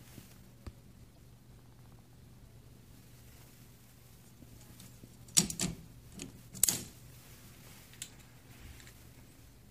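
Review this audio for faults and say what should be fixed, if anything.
There's damaged data in the compressed stream at about 1.16 s and 8.53 s, each a short blip where the decoder misreads corrupted frames and resyncs. Fix it by re-fetching from a clean source and checking file integrity before decoding.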